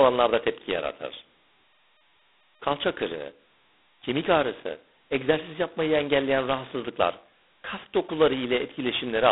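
Speech, and the whole thing has been through G.726 ADPCM at its roughest. Each sample is coded as a tiny difference from a running prediction, and with so few bits that error comes out as a harsh, rasping hiss riding up and down with the talker's level, which fits the 16 kbit/s mode. The band is telephone-narrow too, roughly 200 Hz to 3.6 kHz, with nothing at all above 3.9 kHz.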